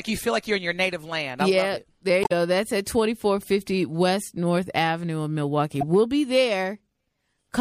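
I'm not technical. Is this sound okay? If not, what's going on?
No. Damaged data in a compressed stream causes brief glitches at 2.21 to 2.32 s and 5.81 to 5.83 s. Part of the stored speech file was corrupted there, so the playback software misread those moments and produced short chirps or blips instead of the real sound.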